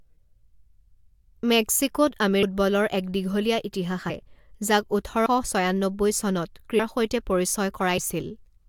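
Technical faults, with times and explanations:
2.42, 4.09 to 4.11, 5.25, 6.78 and 7.97 s: compressed frames skipped. The sound jumps ahead by roughly 0.4 s at the first and last, and 0.15 to 0.2 s elsewhere, in steps of the 23.2 ms frame. Overlapping frames smear each join into a soft blip. On a spectrogram, harmonic tracks end abruptly and restart unrelated, with a faint vertical smudge. The waveform shows no spike.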